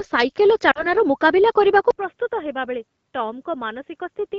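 At 0.71 to 0.86 s, lost AMR speech frames cause a brief dip to near silence. About 40 ms of data, which fits two 20 ms frames, was corrupted by radio errors, and the decoder extended the last pitch with falling gain. On a spectrogram, frozen harmonics fade into a short gap before the speech resumes weak.

From 1.90 s to the end, the input likely switched to a poorer device. After an 80 ms silence the speech turns dull and boxy and drops roughly 10 dB, with a faint new noise floor far below it. The spectrogram shows nothing above 3.6 kHz, and the waveform shrinks after the gap.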